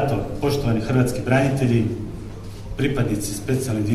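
At 2.29 s there's a block of digital silence, about 5 ms of samples dropped to zero with hard edges, so it comes across as a quick tick.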